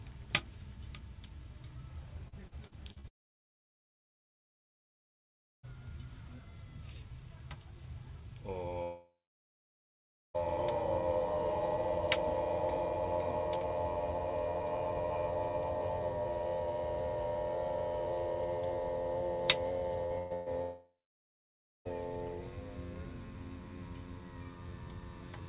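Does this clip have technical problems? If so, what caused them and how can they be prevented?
Yes. Repeated packet loss (robotic sound) runs from 2.28 to 3.07 s. Five gaps hit this stretch, the longest about 45 ms, and together they cover roughly a quarter of it. Each hole was filled by extending the sound just before it, and the next hole arrived soon after, so the audio turns choppy and mechanical with small pieces missing. Preventing it means keeping the network path stable, for example with wired connections, traffic prioritisation for call packets and forward error correction, so that isolated losses don't cluster.

Long network dropouts occur at 3.08 to 5.66 s, 8.83 to 10.37 s and 20.62 to 21.88 s, lasting about 2.6 s, 1.5 s and 1.2 s. Each opens with a brief continuation of the last sound that fades quickly into silence. Most of each span is silent, and the audio then resumes further on with that stretch gone. 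The likely cause is the network delivering nothing for that long. Preventing it requires a more reliable connection or automatic failover to a backup link.

Short concealed packet loss appears at 20.06 to 20.13 s, where about 40 ms never reached the decoder in time. The receiver patched the hole by extending the preceding sound and then blended back into the real signal, which produces a quick smear or wobble rather than a clean gap, and anything brief at that moment can disappear. Preventing it means reducing random loss on the link, helped by error correction or a slightly deeper jitter buffer.

Bursts of packet loss follow right after, at 20.18 to 20.33 s and 20.34 to 20.49 s, each about 120 ms. In both, consecutive packets were lost or arrived too late, and the receiver held the last sound as a buzz or hiss for the whole gap without falling silent. The audio picks up afterwards with that piece missing, and this cluster leads straight into the dropout at 20.62 s. 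Preventing it needs better burst protection, such as interleaving or redundant packets, together with fixing the congestion behind it.

Throughout, the call codec (G.711 mu-law) passes nothing above 4 kHz, which gives the familiar narrow telephone band.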